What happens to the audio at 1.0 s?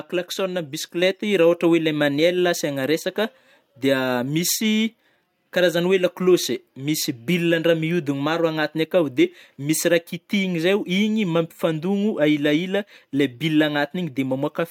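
At about 1.02 s you get a microphone volume stepped up fault: the level jumps by about 5 dB in a single step, right before "rah ôhatra oe le". The call software has judged the mic too quiet and bumped the device's input volume, so the voice and the background noise get louder together, all at once. There's no gradual ramp, just an abrupt shift to a higher level that stays there.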